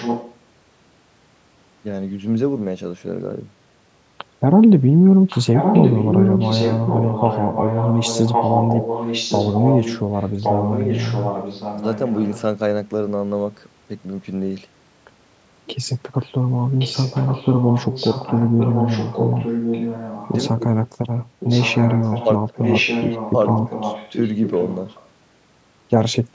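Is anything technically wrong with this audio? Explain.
Yes, echo leak: a far end on loudspeaker likely had an echo canceller that let its microphone pick-up return into the call. A copy of the speech trails it by about 1.1 s at 0–0.37 s, 5.3–12.41 s, 16.79–20.59 s, 21.4–22.28 s, 22.56–24.29 s and 24.46–25.09 s. The copy is mostly only slightly quieter than the speech, fainter at 21.4 s and much fainter at 24.46 s.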